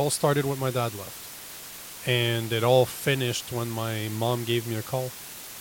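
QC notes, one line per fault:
Throughout: low bit depth with dither. There's a steady, even hiss sitting under the speech the whole way, only about 15 dB down from it, so it's pretty prominent. The level points to something like a 6-bit signal. Dither was added before the rounding, which breaks the rounding error away from the signal and spreads it out as flat white noise. That's why you hear a constant hiss instead of gritty distortion that follows the speech.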